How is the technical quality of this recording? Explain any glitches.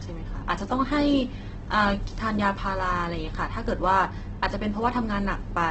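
The recording is heavily degraded throughout by lossy compression. From start to finish the speech sounds rough and grainy, with a noisy, hissy texture where clean tones should be, and nothing above 8.1 kHz. This is likely Opus compression at a very low bitrate, around 12 kbps, in its music (CELT) mode. With so few bits, the encoder keeps each band's energy but fills the detail with folded copies of lower bands or noise, and narrows the bandwidth to wideband.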